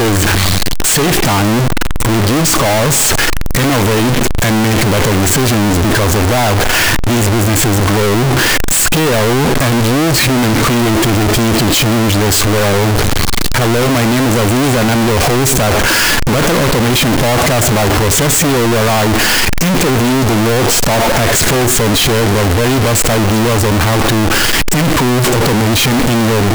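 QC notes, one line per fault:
Throughout: float read as integer. The whole clip is blaring and harsh, with the waveform flattened into near-square blocks sitting at an almost fixed, high level no matter how soft the original passage was. Background noise comes through as loud as the speech, yet the pitch contour remains followable. This likely comes from 32-bit float samples being read as 32-bit integers. Unlike ordinary clipping, quiet passages are just as loud as peaks.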